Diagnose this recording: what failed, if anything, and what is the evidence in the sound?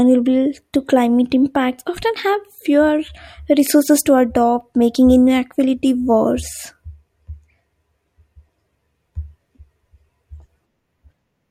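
Nothing in this recording points to a failure at any stage, from the wiring and converter through to playback. The speech carries on without a break, glitch or change in level that would suggest anything went wrong along the way.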